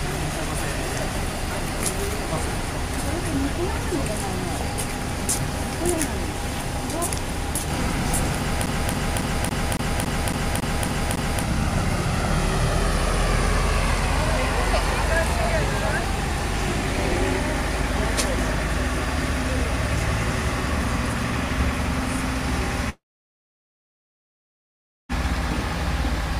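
A scratch on the disc sends the laser back one track on every turn, so from 8.66 to 11.43 s the CD is stuck on one turn: the same 0.28 s of sound plays ten times in a row, each repeat broken by a brief mute at the jump. The result is a fast, perfectly even stutter that goes nowhere until the player finally moves on.

At 22.89 s the audio most likely stops arriving over the network, a long network dropout lasting until 25.12 s. The receiver stretches the last sound it had into a buzz or hiss that fades, leaving about 2.1 s of silence. When sound returns it picks up further along, and the 2.2 s that never arrived is simply gone.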